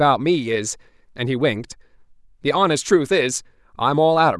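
A recording of speech, and nothing technical in it is wrong. There are no problem moments to time and no cause to point to.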